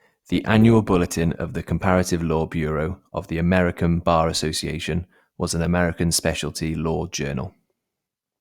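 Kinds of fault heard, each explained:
Adaptive stream starting at a low bitrate: For the first 2.0 s the speech sounds dull and smeared. The treble is thin or synthetic and codec artefacts are strong. The player has started on a cheap version of the stream to begin quickly. That version sounds like Opus at about 24 kbit/s. Once the player has measured the connection, it switches to a richer version. That version fits about 64 kbit/s. The quality then jumps suddenly, with no gap in the sound.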